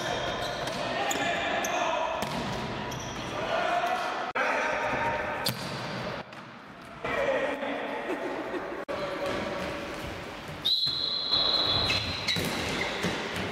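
At 6.21 s the level drops abruptly by about 12 dB and recovers at 7.05 s, then at 11.32 s it jumps up by about 6 dB until 11.98 s: a sudden gain jump, likely from gain applied without a ramp. Sound and background noise shift together, appearing as hard vertical steps in the waveform envelope and spectrogram.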